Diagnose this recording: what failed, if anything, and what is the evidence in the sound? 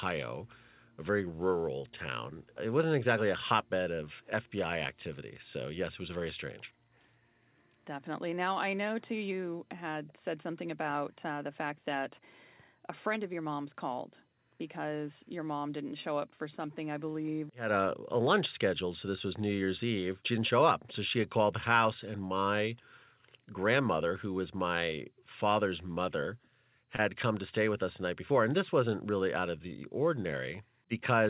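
The network dropped a short concealed packet loss at 26.96 s, after "was my father's mother." About 20 ms arrived too late, so the receiver extended the previous sound for 22 ms and blended back before "come to stay with," leaving a brief smear.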